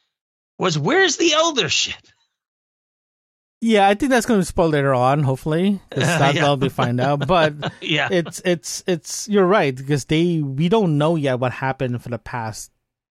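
No technical faults can be heard anywhere in the speech recording. There is no moment in it that calls for a timestamp or a closer listen.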